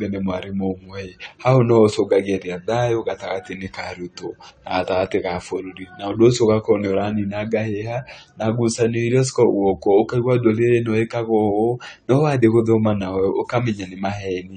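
Throughout the speech, the sound is dull and smeared, with nothing above about 9 kHz and an audibly warbling, fizzy edge on sibilants and held sounds. The likely cause is AAC compression, with damage that points to AAC-LC at a low rate near 32 kbps.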